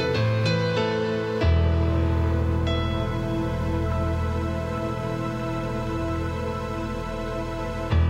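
An everyday sound recording with a train of clicks from 4.33 to 6.17 s: about twenty similar pops at roughly 10.9 per second, unevenly spaced and about as loud as the sound itself. They likely come from interference from nearby equipment or a faulty connection or power supply.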